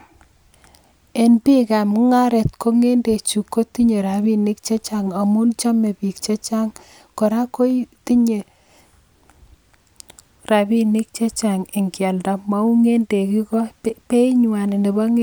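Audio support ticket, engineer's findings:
No faults found on listening to the speech clip. No defect to trace to any component, ticket can close.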